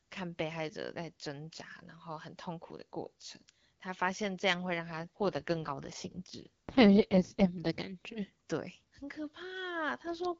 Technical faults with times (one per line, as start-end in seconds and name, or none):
4.82-7.70 AMR rate drop
10.03-10.34 AMR rate drop